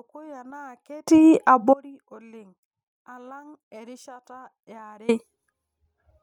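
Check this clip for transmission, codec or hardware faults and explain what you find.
Two faults are audible in the speech.

From 0.00 to 1.08 s the speech is very weak, about 25 dB down. One stereo channel is likely inverted. Summed to mono, the shared centre content cancels. Only the small difference between channels remains.

An audio dropout to a faint residue runs from 1.74 to 5.09 s, about 3.35 s long. The speech cuts out abruptly. A faint trace stays, roughly 25 dB below normal. The likely cause is a lost signal while the downstream path stayed live.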